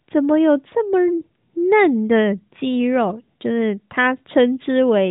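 No faults can be heard in this speech clip. It comes through the AMR narrowband mobile codec, with nothing above about 3.8 kHz and the light codec damage expected at a bitrate that fits 12.2 kbps.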